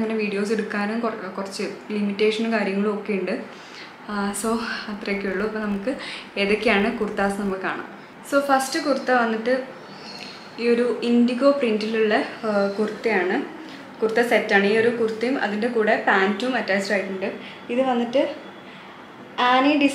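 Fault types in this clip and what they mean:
Filter restarted on every block: the filter loses its internal state at each block boundary and starts again from silence, so every block opens with a small transient. From 4.1 to 7.54 s those transients repeat 50 times a second. That points to blocks of about 20 ms and comes across as a 50 Hz buzz that follows the level of the sound, getting louder and quieter along with it.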